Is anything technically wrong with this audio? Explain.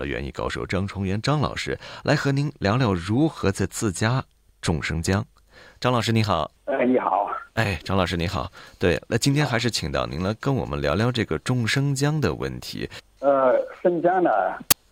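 Yes, there's one problem. At 14.71 s, file tags played as audio: an embedded cover picture gets read as samples, so its compressed data bursts out as a hard-edged click of very loud white noise.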